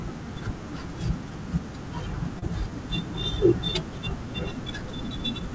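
At about 2.39 to 2.45 s the speech has a short concealed packet loss: roughly 30 ms of audio never reached the decoder in time, and the receiver synthesised about 27 ms to cover it by carrying the preceding sound forward before blending back in. It comes across as a brief smear or wobble rather than silence. That continuation is what separates it from a plain dropout, which would leave an audible hole, or a click, which would be a sharp transient. The call path's band limit, with nothing above 8 kHz, fits a G.722 codec.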